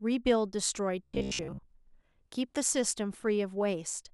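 Robotic sound from repeated short buffers runs from 1.03 to 1.67 s. The speech collapses into a stiff, metallic buzz near 66.7 Hz that only loosely tracks the words. This is likely from audio arriving too late, with a roughly 15 ms slice replayed over most of that stretch.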